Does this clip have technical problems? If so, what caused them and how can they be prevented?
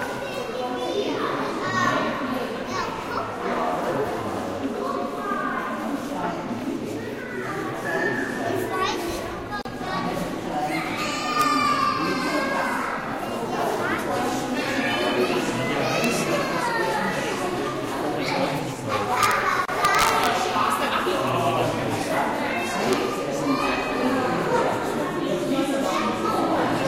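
Yes. There is a gap at a join of encoded pieces at 9.62 to 9.65 s (about 38 ms) and again at 19.65 to 19.68 s (31 ms), ten seconds apart. Separately encoded sections were joined with their start delay and end padding left in, so the sound drops out briefly and resumes where it left off. A spectrogram shows a thin vertical blank band with slightly smeared edges, and the waveform shows a flat stretch. Trimming each piece's encoder delay and padding before joining, or encoding the audio as one continuous stream, prevents it.

Integer overflow causes harsh cracks at 11.42 s, 16.04 s and 22.93 s, and over 19.23 to 19.31 s and 19.85 to 20.27 s, where peaks exceed full scale by up to about 3 dB. Sample values that passed the integer limit wrapped to the opposite sign when they should have been clamped. On the waveform, peaks jump abruptly from top to bottom, and a spectrogram shows bright broadband vertical streaks. 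Using saturating arithmetic or a limiter before converting to integer prevents it.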